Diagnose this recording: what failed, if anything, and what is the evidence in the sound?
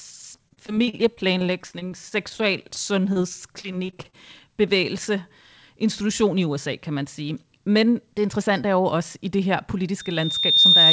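Network stage: repeated packet loss (robotic sound) from 0.36 to 3.17 s and again from 3.61 to 4.15 s. The speech turns choppy as short holes, the longest 37 ms, are bridged by extending the last received sound, then another loss follows.

Analogue acoustic loop: a loudspeaker feedback squeal begins at 10.0 s and runs to the end. A 3.6 kHz tone swells over most of a second to around 10 dB above the speech, because microphone and loudspeaker form a loop whose gain exceeds one there.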